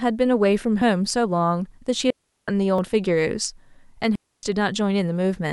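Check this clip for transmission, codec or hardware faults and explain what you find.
Two transmission faults are present in the speech, each occurring twice.

At 0.82 s and 2.8 s, overlap between stream segments: timestamps of roughly 1 s segments collide, the overlap is trimmed, and about 5 ms and 17 ms vanish, giving a tiny skip.

From 2.10 to 2.48 s (375 ms) and 4.15 to 4.43 s (278 ms), digital wireless dropout: the receiver mutes after losing data, leaving clean near-silent holes without noise bursts.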